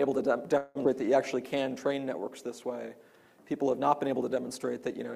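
From 0.57 to 0.77 s the audio stalls for about 0.18 s, and the last sound is stretched into a buzzy or hissy continuation instead of moving on. This is a call audio freeze, likely from packets held up until the jitter buffer ran dry. Unlike a skip, the sound resumes where it stopped, so nothing is lost.

At 0.83 to 0.86 s comes the opposite, a skip ahead. About a tenth of a second of audio is dropped and the two sides are spliced with only a tiny bridge, so playback lurches forward. Here material is missing rather than a pause being inserted.

From 1.35 to 2.60 s a jitter buffer slow-down stretches the passage by 114 ms, running it at 92% speed. Repeated pitch periods or pause fragments draw sounds out while pitch stays the same. This sets it apart from a tape-style slowdown, which would also lower the pitch.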